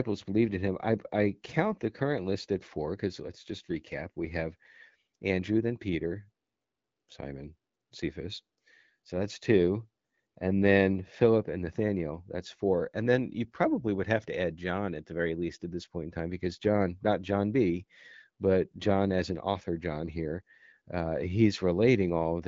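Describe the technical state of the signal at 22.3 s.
At 22.3 s the signal is intact, with the speech passing through the AMR wideband (HD Voice) codec at 12.65 kbit/s and no fault present at that moment.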